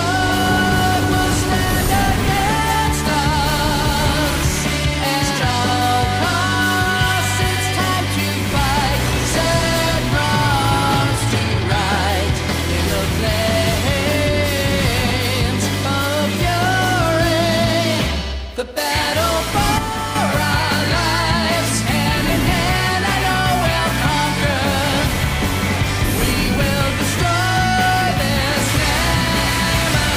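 At 19.78 s the level drops abruptly by about 6 dB and stays down until 20.16 s, when it returns just as suddenly: a sudden gain jump lasting roughly 0.37 s. The sound and its background noise fall and recover together, so the dip reads as a volume change rather than a change in the source. The likely cause is a digital gain setting applied from one sample to the next with no ramp. On a waveform the envelope steps down and back up as a sharp-edged block; a spectrogram shows every band dimming uniformly between those two vertical edges.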